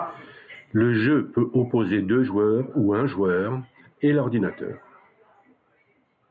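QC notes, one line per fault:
Nothing stood out on listening to this speech recording.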